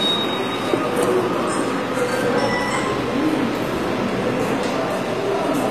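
Throughout the clip the treble appears to have been synthesised rather than carried, likely by HE-AAC compression at a low bitrate, around 24 kbps, copying lower bands upward. The high end sounds bright but gritty and metallic, plainly damaged, with nothing above 14.9 kHz.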